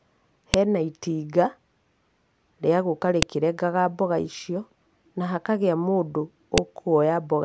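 Sharp snaps at 0.54 s, 3.22 s after "rĩa gũka", and 6.58 s after "icio na hakagĩa mũndũ" are a file header played as audio: header bytes at segment joins, loud regardless of the speech, unlike dropout clicks.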